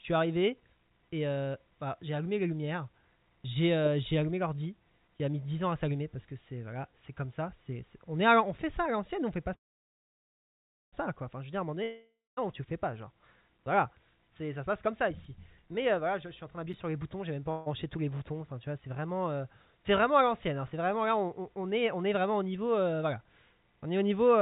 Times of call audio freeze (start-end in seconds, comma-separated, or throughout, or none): 9.54-10.94